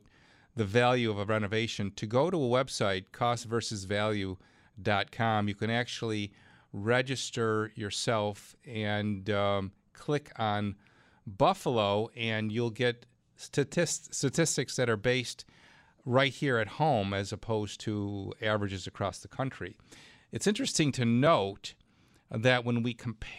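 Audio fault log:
No audible faults detected.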